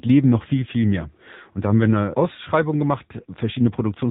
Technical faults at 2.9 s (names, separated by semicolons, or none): AMR narrowband mobile codec